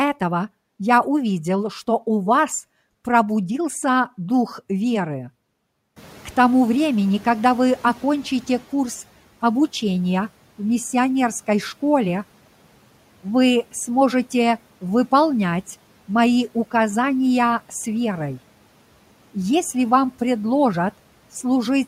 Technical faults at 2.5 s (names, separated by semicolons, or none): none